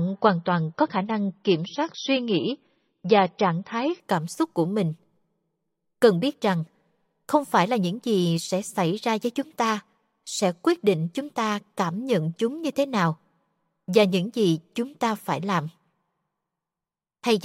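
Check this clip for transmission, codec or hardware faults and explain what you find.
One codec fault is present. Adaptive stream starting at a low bitrate, from 0.0 to 4.0 s: the player began on a low-quality rendition, which fits MP3 at around 24 kbit/s, then switched to a better one, around 128 kbit/s, once it had measured the connection. Until then nothing is heard above 5.9 kHz, so the speech sounds dull and more coarsely coded. Fuller treble returns abruptly, with no gap, just before "cảm xúc của mình".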